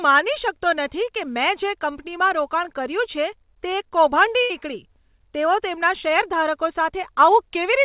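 Speech over a call line band-limited to 4 kHz, with a burst of packet loss at 4.42 to 4.52 s: about 77 ms is concealed by a fading continuation rather than silence, and speech resumes further on.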